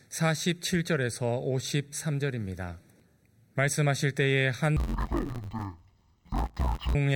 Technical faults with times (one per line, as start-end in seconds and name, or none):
4.77-6.95 interleaved audio read as planar